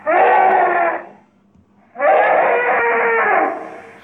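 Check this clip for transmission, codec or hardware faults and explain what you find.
One fault is present: channel delay (comb filtering) from 0.52 s to 3.45 s. One channel lags the other by roughly two samples, a few hundredths of a millisecond, so the mono sum cancels near 10 kHz, dulling the top end.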